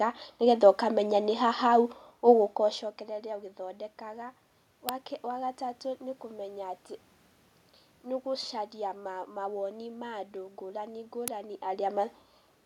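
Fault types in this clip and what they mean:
Uninitialised buffer: an output block was sent for playback before any audio had been written into it, so whatever stale memory it held was reproduced as samples. Here it shows as two very brief, loud events cutting through the speech, a crack at 4.89 s and a burst of digital noise at 11.28 s. The first lasts under a millisecond, which fits a 32-sample block. The second runs about 2.9 ms, consistent with a 128-sample block.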